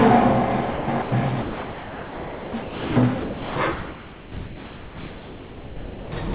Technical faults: sound dropped by the voice detector

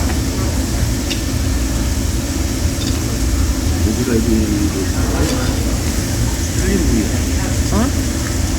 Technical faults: none

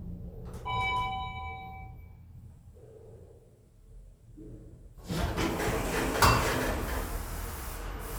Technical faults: none

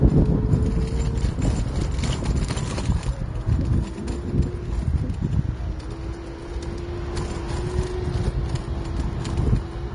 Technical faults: Vorbis compression

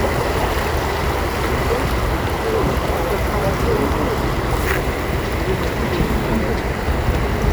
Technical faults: none

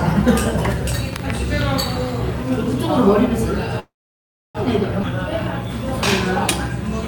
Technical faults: call audio freeze; skip ahead

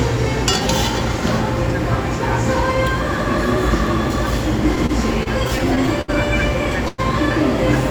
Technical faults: repeated stalls (stutter); call audio freeze

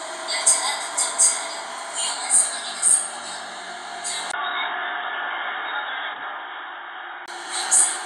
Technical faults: input switched to a poorer device

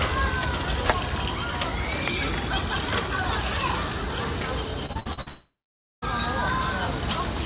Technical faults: repeated packet loss (robotic sound); long network dropout

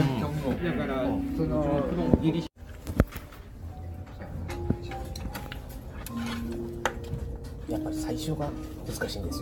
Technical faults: generation loss

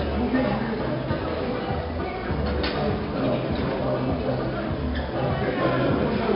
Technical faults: 4-bit ADPCM compression

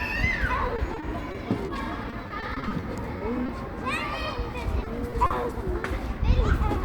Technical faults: repeated packet loss (robotic sound); short concealed packet loss

